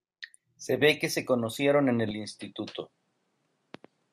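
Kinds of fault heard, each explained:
Input switched to a poorer device: After "que se conocieron en", at 2.11 s, the speech suddenly turns duller, with nothing above 11.4 kHz. It drops about 5 dB and gains a faint new noise floor. There is no gap. The likely cause is a change of input device.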